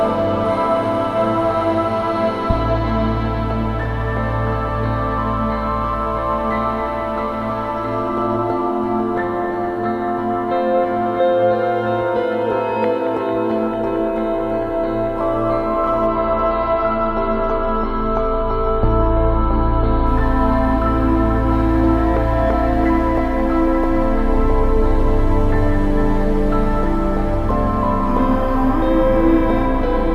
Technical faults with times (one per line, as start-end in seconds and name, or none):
16.07-20.07 adaptive stream at a lower bitrate